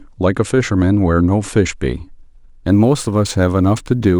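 From 2.14 s to the end of the clip the speech picks up sample clock jitter. The converter's sampling instants wander by a few microseconds, so each sample lands slightly off its proper time. The resulting error scales with how steeply the waveform is changing. It sits roughly 35 dB below the signal and is heard as a fine hiss and graininess riding on the speech. It is strongest on loud passages and sharp high-frequency sounds, and it drops away in the pauses.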